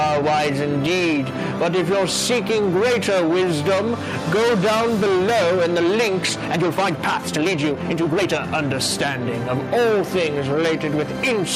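The audio has gain pumping throughout: the gain swings by roughly 5 dB with loud sounds, likely from excessive gain driving a fast limiter, visible as a breathing waveform envelope. From 6.27 to 8.33 s a time-stretched section plays 1.61 times faster at unchanged pitch, sounding rushed; the spectrogram shows compressed, abruptly spliced segments, likely from stretching software.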